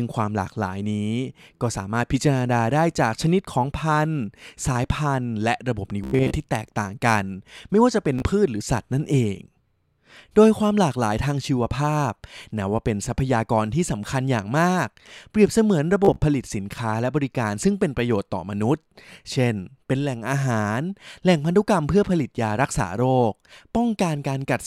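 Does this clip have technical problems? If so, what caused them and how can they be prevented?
Yes. Bluetooth stutter: late or lost packets made the receiver replay its last buffer, giving a buzzing repeat at 6.04–6.35 s, 8.19–8.24 s and 16.05–16.23 s before the sound skips ahead. Keeping the devices close, clear of obstructions and away from 2.4 GHz interference would prevent it.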